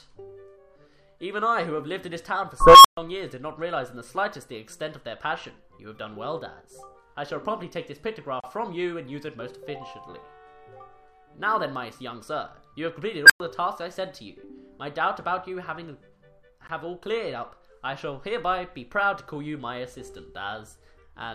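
A recursive filter in the processing chain went unstable twice, fed bad coefficients so that its output grew without limit until the numbers overflowed and it reset. In the audio this is heard as an unstable filter tone: at 2.60 to 2.97 s a tone of around 1 kHz swells over about 244 ms before the sound drops out for about 128 ms, and at 13.26 to 13.40 s a tone nearer 1.5 kHz builds much faster, in about 40 ms, followed by about 104 ms of silence. Separately, the audio was encoded in pieces and joined without trimming each encoder run's start-up delay and last-frame padding, leaving a gap at a join of encoded pieces where continuous sound breaks and then resumes from where it stopped. This happens at 8.40 to 8.44 s, a gap of about 33 ms, and again at 16.67 s, a shorter gap of about 19 ms. Because the codec smears the edges, each break is shorter as true silence than its full length.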